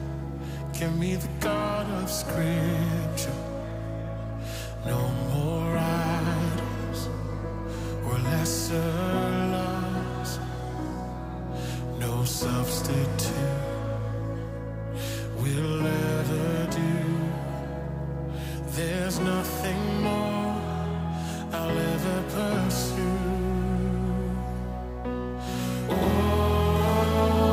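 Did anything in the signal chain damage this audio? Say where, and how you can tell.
Yes. From 25.54 s to the end, a doubled audio track appears, likely from a second, slower capture path or a misaligned edit carrying another copy of the same signal into the mix. A full-band duplicate trails the original by roughly a tenth of a second at about equal level, so every onset is followed by a crisp slapback repeat. It carries no decay or room colour, and it starts abruptly at 25.54 s, which a natural reflection would not do.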